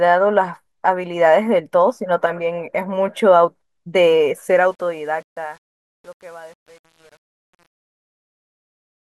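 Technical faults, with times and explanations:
4.49–9.12 s, truncation distortion on a fade: from 4.93 s the fading speech turns gritty, consistent with an undithered 8-bit stage. Unlike clipping, it worsens as the level falls.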